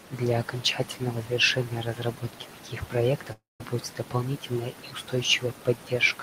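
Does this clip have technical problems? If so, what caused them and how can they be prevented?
Yes. From 3.32 s to 3.61 s the speech breaks off in what is likely a long network dropout: about 280 ms of audio never arrived. The receiver stretched the last sound into a fading buzz, then left about 170 ms of near-silence before the speech resumed with the lost part gone. On a spectrogram, the final harmonics smear into a decaying band and then a dark gap. Prevention: use a stable connection with larger jitter buffering or packet redundancy.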